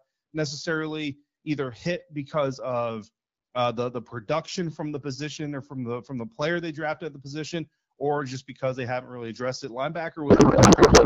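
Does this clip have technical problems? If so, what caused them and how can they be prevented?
Yes. From 10.29 s to the end, the speech gives way to garbled noise and warble that barely tracks it. This is a codec payload misread. The decoder keeps receiving well-formed AMR-WB frames but reads their fields from the wrong bit positions, which fits octet-aligned packing being parsed as bandwidth-efficient. Packet loss would produce brief gaps or smeared concealment that recovers. This garbling instead runs unbroken and never recovers, and the damage to the speech comes from the misreading rather than from missing data. Before this point the AMR wideband coding sounds clean, as expected near 12.65 kbit/s. It can be prevented by making both ends negotiate and enforce the same octet-align setting in the session description.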